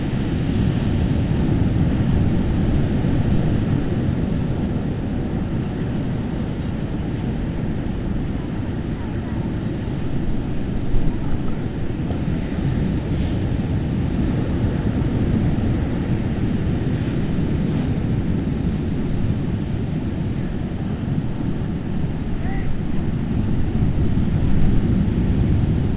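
Nothing here counts as a fault: the sound came through a call path that tops out around 4 kHz, which fits G.711 A-law telephone coding, and that narrow top end is just what such a link delivers.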